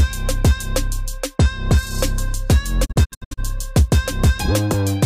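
A digital broadcast dropout breaks up the audio between 2.84 and 3.40 s. The receiver stopped getting decodable frames and muted, with each cut fading out over about 20 ms rather than clicking. The silence arrives as a cluster of short holes, none longer than 64 ms, totalling about 288 ms of missing sound across roughly half a second. That pattern fits around nine frames failing their checks, and the sound sent during those holes is simply gone.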